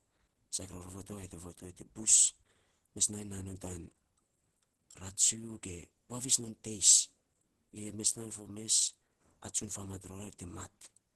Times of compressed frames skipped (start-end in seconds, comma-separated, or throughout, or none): none